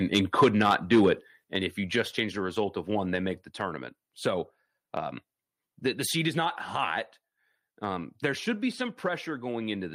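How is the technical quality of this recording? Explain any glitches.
The opening second of speech is harsh and crackly, and the level then drops twice. From 0.14 to 1.09 s the loudest syllables sound gritty and flattened, a microphone overload, likely from input gain driving peaks about 8 dB past the converter's limit, clipping a few percent of samples. At 0.44 s (about 2 dB) and 1.44 s (about 7 dB), voice and background suddenly get quieter together, likely the microphone volume stepped down by call software reacting to those clipped peaks.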